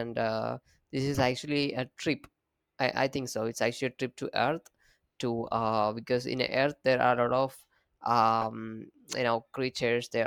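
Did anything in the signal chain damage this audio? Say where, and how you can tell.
Yes, at the codec's decode stage, where corrupt frames were decoded. Short chirp-like blips sit on top of the speech at 1.14 to 1.17 s, at 3.29 s, and at 8.41 to 8.45 s, the last being the loudest at around -20 dBFS. Each one lasts a frame or a few frames. Flipped bits in those compressed frames were decoded anyway, so misread gains and codes pushed energy into the wrong frequencies for the length of each damaged frame.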